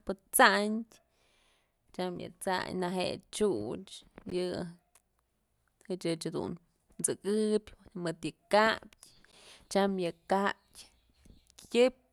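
At 4.30 s and again at 9.32 s the speech drops out for about 13 ms, a gap between chunks: the audio arrives in 5-second pieces and each join leaves a short silent hole. On a waveform, a flat hard-edged notch; on a spectrogram, a thin vertical blank stripe.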